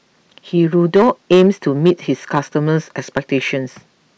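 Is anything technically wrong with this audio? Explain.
Yes, the speech has hard clipping from 0.62 to 1.91 s (about 5 dB over), at 2.35 to 2.39 s (about 3 dB) and at 3.17 s (about 7 dB). The peaks exceed the stage's ceiling and are cut flat, producing crackly fuzz rather than the rounder, warmer distortion of soft saturation.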